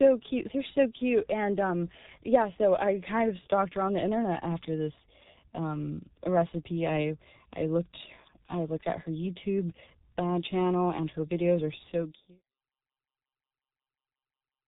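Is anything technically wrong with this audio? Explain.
Yes. Throughout the speech, G.723.1 codec damage is heavy: everything above 4 kHz is missing, and the slowly updated voice model over 30 ms frames leaves a hoarse, blurred texture with smeared consonants, which fits a bitrate near 6 kbit/s. A simple low-pass filter would only muffle. The fade-out from about 11.5 s to 12.44 s is smooth.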